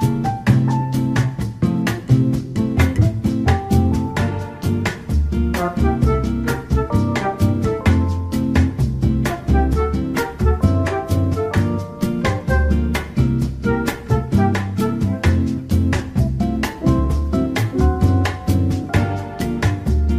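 Nothing in the audio stood out as a technical problem on listening.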